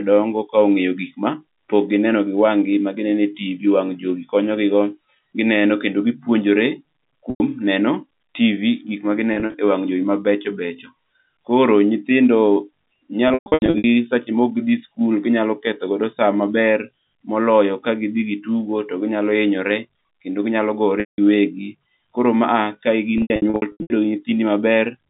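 Packet loss with pitch repetition hits at 7.3, 9.34, 13.28, 21.0 and 23.18 s. The receiver loops the last pitch period to cover the lost audio, which fits 20 ms packets. That gives a brief buzzy hold on the single 100 ms drop. The scattered runs at 13.28 and 23.18 s, around 0.4 s lost each, sound choppy and fade in and out. All of it sits inside clean G.711 telephone band audio.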